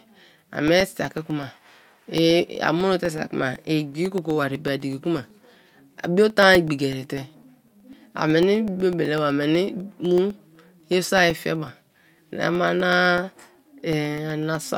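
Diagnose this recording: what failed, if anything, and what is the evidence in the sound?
Regular ticks sound every 0.125 s from 0.05 to 14.68 s: periodic USB or driver dropouts, the driver stage silencing about a millisecond each time.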